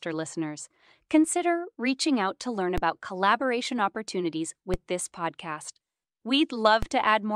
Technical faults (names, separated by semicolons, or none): DC step